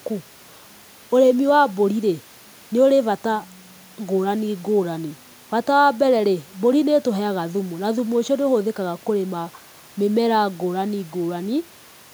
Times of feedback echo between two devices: none

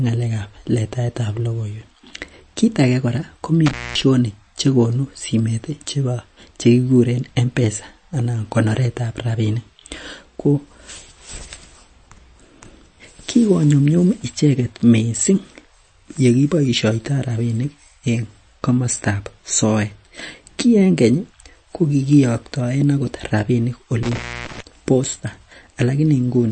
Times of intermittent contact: 3.66-4.02, 24.03-24.60

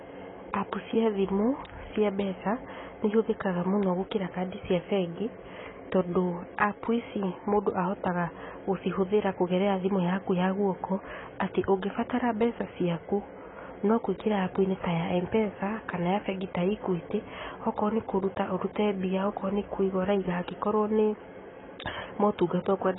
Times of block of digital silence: none

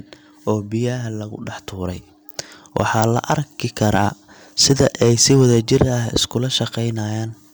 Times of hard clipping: 2.77-3.34, 3.82-4.05, 4.61-6.16

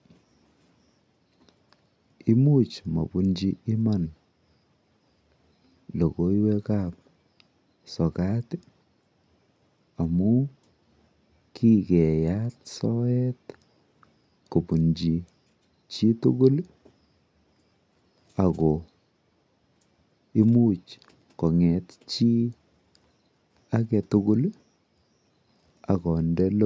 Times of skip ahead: none

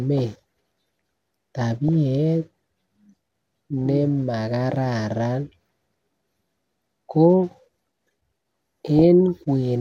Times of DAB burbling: 1.78-1.89, 8.97-9.05

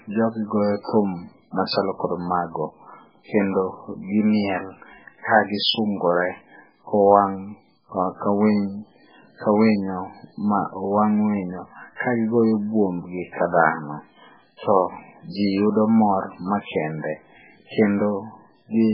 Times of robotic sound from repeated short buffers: none

